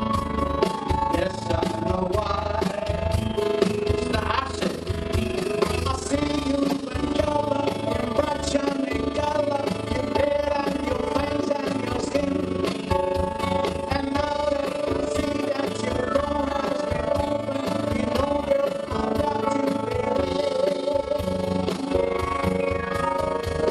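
From start to finish the sound carries a fast, buzzy flutter, a rough tremolo pulsing at around 30 Hz with level swings of about 11 dB. This is overlap-add ripple. The audio was split into windowed frames and rebuilt with an overlap whose windows don't add up to a steady gain, so the level dips and swells once per frame. The flutter rate reflects that frame spacing.

At 6.68 s a brief stutter breaks the flow: a 52.2 ms snippet plays a second time. These are repeated frames. A short run of compressed data was delivered twice, and the decoder played it again, which fits a couple of codec frames being duplicated. That adds 52.2 ms to the running time from that point onward.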